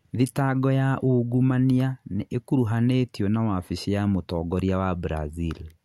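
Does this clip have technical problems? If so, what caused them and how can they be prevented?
No, there are no technical problems in this speech clip.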